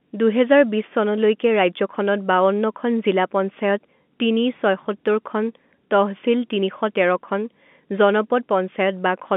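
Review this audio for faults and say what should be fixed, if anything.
Nothing to fix: the speech sits in the narrow 200 Hz to 3.5 kHz band expected of G.711 telephone coding, and no faults are present.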